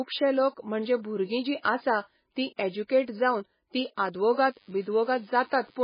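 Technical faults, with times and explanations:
Throughout, MP3 compression: the speech sounds watery and swirly, likely from a low-bitrate encode near 16 kbps, with a spectrogram showing nothing above 5 kHz and patchy, flickering high bands.
4.26 to 5.83 s, DECT cordless phone buzz: after "जावन ती", a steady thin 100 Hz buzz about 35 dB below the speech, seen as evenly spaced harmonic lines on a spectrogram.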